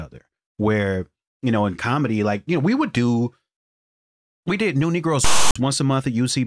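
At 5.24 to 5.56 s, file tags played as audio: text metadata read as samples gives a hard-edged, one-sided rasp, then flat silence from padding, a lopsided waveform block.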